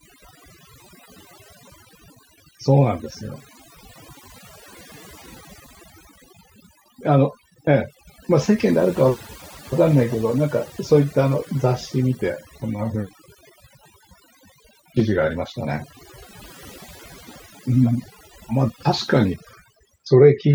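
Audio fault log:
Throughout, overdone noise removal: the denoiser is set so aggressively that frequency bands near its noise estimate are pulled down or shut off entirely, taking quiet speech detail with them. Unlike a plain gate, the gaps fill with twinkling specks.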